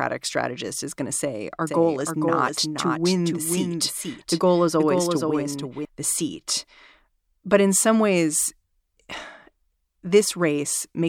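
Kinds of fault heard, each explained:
Doubled audio track: from 1.67 to 5.85 s the speech repeats about half a second behind, roughly 5 dB quieter, likely from a second, slower capture path.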